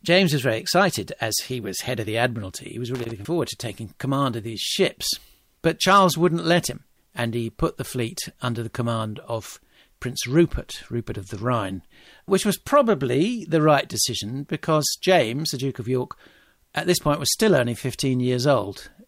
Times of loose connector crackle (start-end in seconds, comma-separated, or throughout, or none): 2.95-3.12